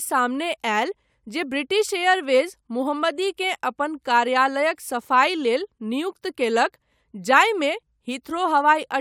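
No technical faults are audible.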